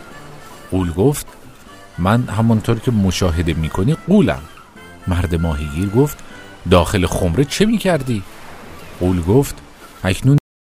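At 10.38 s there's a cut-off end: the final buffers never got written, so the sound stops mid-stream and drops straight to digital silence with no decay.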